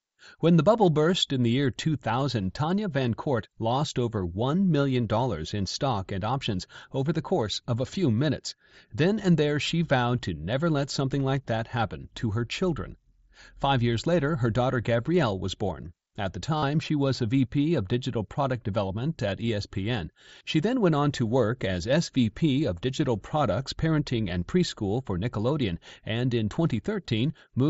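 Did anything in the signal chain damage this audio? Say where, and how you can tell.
Yes, over the wireless link between headset and phone, at 16.57 to 16.63 s, just before "she was a", there is concealed Bluetooth headset packet loss. For about 52 ms, which fits a run of roughly seven 7.5 ms frames, the receiver filled the gap by repeating the best-matching recent stretch of waveform. That produces a buzzy, held tone at full level. On a waveform it shows as a block of near-identical repeating cycles. On a spectrogram it shows as flat harmonic stripes, then a brief smear where real audio resumes. The mSBC headset codec itself adds only light graininess.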